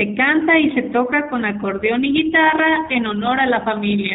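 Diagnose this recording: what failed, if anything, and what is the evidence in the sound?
The speech passed through a low-bitrate G.729 codec, most likely the G.729A variant, at a rate that fits 8 kbit/s. The coder rebuilds each 10 ms frame from a vocal tract filter, a pitch predictor and a handful of pulses, and discards everything above 4 kHz. The damage is plainly audible throughout: the top end is missing, sibilants are dull, and the voice has a rough, slightly synthetic buzz where the excitation model approximates the real waveform.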